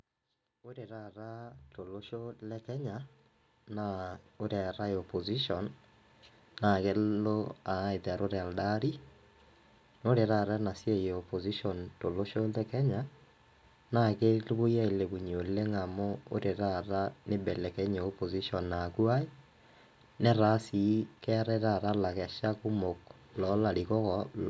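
From 0.63 s right through to 18.56 s you can hear automatic gain rising: the gain control decided the input was too quiet and kept nudging its gain up, about 19 dB in all. It's a slow creep rather than a jump, so the speech and the background noise swell together and the room gets steadily louder behind the talker. The call microphone processing is audible too, with nothing above 8 kHz.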